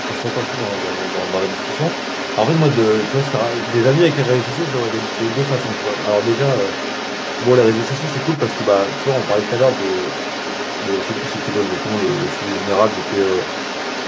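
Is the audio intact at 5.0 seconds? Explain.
No. At 5.0 seconds the speech is not clean. A second, fainter voice runs underneath it, roughly 10 dB below the main talker. This is the other side's voice leaking through, and it is present from 0.0 to 14.07 s, not just at this moment. The likely cause is the talker's device playing the far end on its loudspeaker, with the echo canceller failing to remove that sound from the microphone signal.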